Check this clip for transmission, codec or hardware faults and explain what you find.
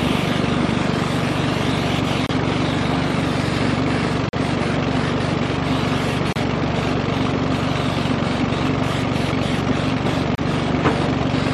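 One fault recurs: a gap between stream segments at 2.26–2.29, 4.29–4.33, 6.33–6.36 and 10.35–10.38 s. Each is a hard-edged silent hole of about 30–40 ms, falling at boundaries of the 2 s segments, where misaligned segment timestamps leave padding. Unlike a dropout, no audio is lost, and the sound resumes exactly where it paused.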